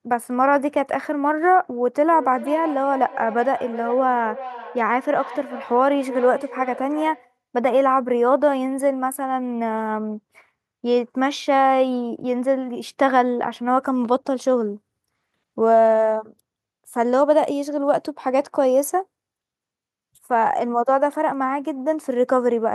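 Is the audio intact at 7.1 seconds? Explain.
No, a feedback echo between two devices runs from 2.02 to 7.38 s. A second device replays this speech into the microphone, so each phrase returns roughly every 0.4 s, up to about 15 dB below the speech, thinner and more ringing.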